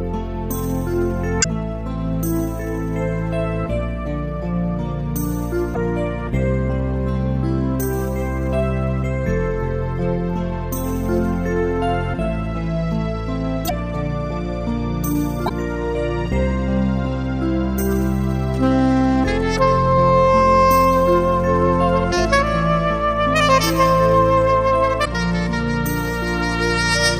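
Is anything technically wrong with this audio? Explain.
Yes. The compressed stream carries damaged data at 1.40–1.46, 5.74–5.77, 13.65–13.71, 15.45–15.51 and 25.01–25.07 s. Corrupted bytes there make the decoder misread frames and lose sync until it finds a valid header, so each spot sounds like a brief chirp or blip lasting 30 to 60 ms.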